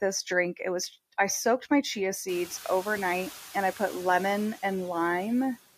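Speech runs through noise suppressor artifacts across the whole clip, pulling steady background down by about 9 dB. The spectrogram shows noise dipping in pauses and flickering back under the voice. Room noise jumps by about 22 dB around two and a half seconds and stays about 19 dB below the speech.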